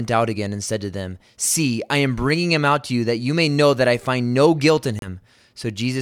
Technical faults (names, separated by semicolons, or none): Bluetooth stall